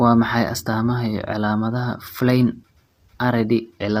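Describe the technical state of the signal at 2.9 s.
At 2.9 s, as throughout the clip, the speech is plainly rough and grainy, which fits a low bitrate around 32 kbps and likely low-delay AAC compression whose short frames blur pitch harmonics.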